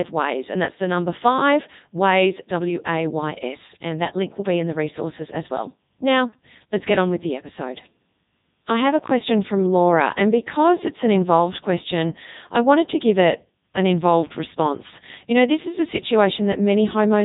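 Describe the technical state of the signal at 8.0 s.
At 8.0 s the speech is carried through the Codec 2 vocoder, as it is across the whole clip. The decoder does not reproduce the waveform; it rebuilds each frame from sine waves driven by pitch, voicing, energy and a spectral envelope, and here it runs in its top 3.2 kbit/s mode with heavy damage. The result is robotic, buzzy speech with nothing above 3.8 kHz.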